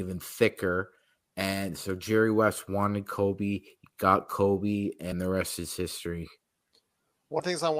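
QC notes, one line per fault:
5.11 and 7.38–7.40 s, compressed frames skipped: the audio jumps forward twice, dropping a couple of 26.1 ms frames (around 50 ms) and then about five (around 150 ms). The overlap between neighbouring frames smears each join into a short blip, not a sharp click.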